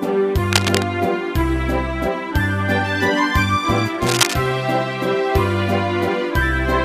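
A burst of harsh scratching and rustling sits over the sound from 0.47 to 0.86 s, a little below it in level, and returns from 4.02 to 4.36 s at roughly equal loudness. This cable scratch noise likely comes from a worn connector or cable being moved, its contact resistance jumping erratically.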